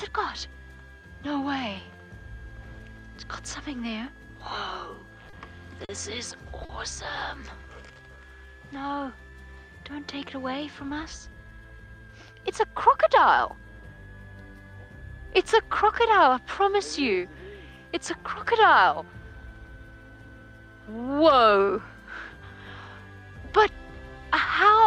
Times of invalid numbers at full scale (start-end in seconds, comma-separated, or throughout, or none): none